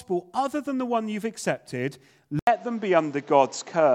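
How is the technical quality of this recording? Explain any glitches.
One glitch stands out near the end of the speech.

Input switched to a poorer device, from 2.39 s to the end, right after "the one you've accepted": the recording likely jumped to another microphone or headset mid-take. An 80 ms gap marks the switch. After it the band stops at 7.7 kHz, so the speech turns duller and boxier. The level shifts by about 5 dB, and a new background noise floor appears roughly 30 dB below the speech.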